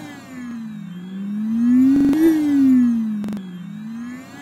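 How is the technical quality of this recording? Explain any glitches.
The recording has three repeated-buffer stutters, where audio dropouts were masked by replaying stale data. At 0.51 s one piece of about 43 ms plays twice. From 1.96 to 2.13 s a piece sounds five times, and from 3.24 to 3.37 s four times. That fits a 2048-sample buffer being replayed when fresh audio arrived late, losing roughly 40 ms, then about 150 ms twice. Each is heard as a short stutter. On a waveform, identical blocks tile with abrupt joins, and a spectrogram shows vertical lines at each seam.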